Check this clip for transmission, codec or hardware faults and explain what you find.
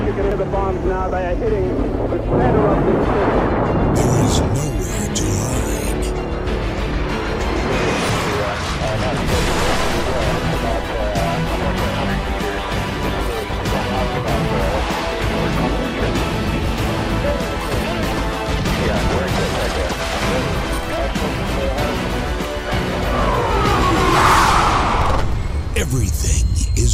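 Checking this clip turns up no faults to explain.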